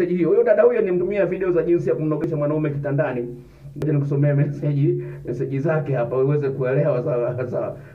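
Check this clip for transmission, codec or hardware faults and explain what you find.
Two short discontinuities stand out, at 2.24 s and 3.82 s, each heard as the sound jumping abruptly forward. The likely cause is a dropped buffer (overrun): the recording side fell behind, the hardware overwrote unread samples, and the surviving audio was spliced end to end, losing roughly a couple of hundredths of a second at the first point and about twice that at the second. The waveform shows a sudden step with no gap, and the spectrogram shows a thin vertical broadband line.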